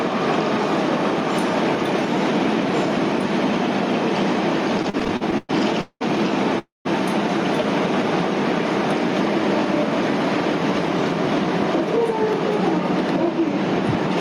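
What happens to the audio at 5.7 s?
At 5.7 s the audio is inside a run of repeated stalls (stutter) lasting from 4.77 s to 6.03 s. Packets reached the receiver late or too slowly, and its jitter buffer kept running dry. Each time, it stretched the last sound to bridge the wait before carrying on. Ten such gaps fall in this span, the longest about 197 ms. Together they make up 454 ms, over a third of the stretch. Nothing is lost, but the sound drags and judders.

Gain pumping also runs through this moment, as it does across the whole clip. The gain swings by a few decibels. Loud and quiet passages sit close together, and the sound feels squashed. This is likely a fast limiter or compressor pulling down gain that was set far too high.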